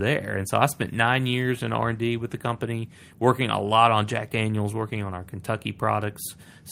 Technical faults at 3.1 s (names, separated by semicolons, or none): none